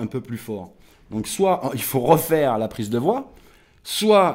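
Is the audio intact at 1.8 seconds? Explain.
No. At 1.8 seconds the sound falls within a run of periodic USB or driver dropouts, from 0.26 to 4.27 s. Every 0.5 s, something briefly stalls the audio path. A tiny sliver, well under a millisecond, is skipped. Each gap gives a regular tick while sound is present.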